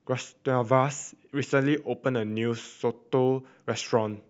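From 1.70 s to the end, a resampler restarted on every block puts a 20 Hz buzz under the speech, which fits a 44.1 kHz to 48 kHz conversion done in separate 50 ms chunks. At each chunk edge the converter lacked the true neighbouring samples, leaving a small error that sounds as a regular tick and blurs into a buzz. A spectrogram shows thin vertical lines every 50 ms, present only where speech is. The waveform shows small glitches at those edges.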